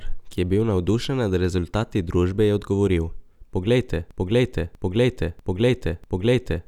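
A broken-record loop starts at 4.11 s in this speech clip and runs to the end. A 0.64 s fragment repeats exactly, back to back, four times, and the speech that should follow is lost, likely because the player or stream stalled and kept resending its last buffered piece.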